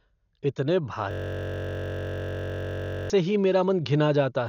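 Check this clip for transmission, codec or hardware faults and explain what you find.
Two problems stand out: a steady codec coloration across the whole speech clip, and a long looping freeze in the middle.

The whole clip is dull, with nothing above 6.9 kHz and a rough, fluttery noise around voiced sounds. That's likely Dolby Digital compression at a low bitrate, roughly 48 kbps, where starved frequency lines get filled with noise.

From 1.11 to 3.10 s there's a system hang loop. One 21.33 ms chunk repeats, giving a steady 46.9 Hz buzz that fits a 1024-sample buffer. The audio comes back just before "से ही".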